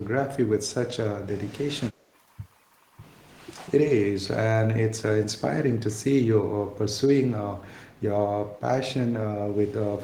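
The speech briefly sinks and chops between 4.13 and 4.3 s, dropping by roughly 25 dB in short bites, then cuts out harder from 4.93 to 5.03 s, falling by around 30 dB. This is speech suppressed in double talk. The likely cause is an echo canceller that met both sides talking at once, could not tell this talker from the loudspeaker echo, and attenuated everything it heard.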